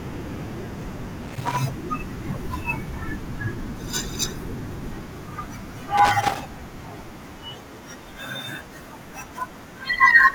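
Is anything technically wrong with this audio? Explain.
Yes, there's loose connector crackle at 1.22–1.59 s and again at 5.98–6.40 s: a worn contact keeps making and breaking, chopping the speech into short irregular bursts of scratchy crackle.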